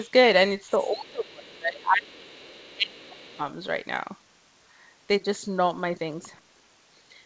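At 0.03–0.11 s, 0.69–1.11 s, 2.54–2.72 s and 3.24–3.3 s a faint second voice, roughly 30 to 35 dB under the talker, slips through: the other side's voice leaking through, likely because the echo canceller left residual loudspeaker echo in the microphone signal. From 0.72 to 3.41 s the main speech is pulled down by up to about 25 dB, which is likely speech suppressed in double talk. The dips are probably tied to the overlapping far-end voice rather than being a steady gain loss. Across the whole clip the G.722 call path leaves nothing above 8 kHz.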